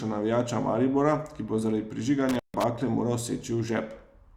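At 2.29 s the speech drops out abruptly, with a crackle as it goes and another as it returns, leaving only faint hiss in between. The disturbance runs until about 2.64 s, and the line itself is dead for roughly 147 ms of that span. This is intermittent contact: a loose plug or cable briefly lost its connection, and the scraping of the contacts as they parted and rejoined produced the crackle around the gap.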